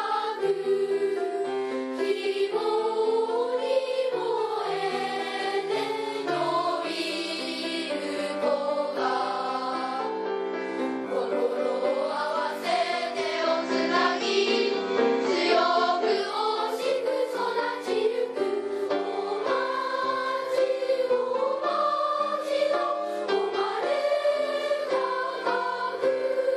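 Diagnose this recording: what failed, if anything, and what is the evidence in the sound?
Digital radio blending to analogue, 13.15–16.39 s, at the receiver: a 326 ms crossfade to FM brings hiss and about a 4 dB level shift.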